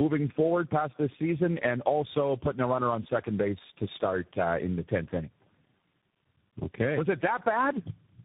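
Throughout the whole clip the speech suffers from tandem speech coding: it has passed through three speech codecs in a row, decoded and re-encoded at each hand-off, so every coder compresses the previous one's errors. The texture fits low-rate coders such as G.723.1 and G.729A followed by CVSD. The speech sounds rough, muffled and warbly, and nothing above about 3.8 kHz survives.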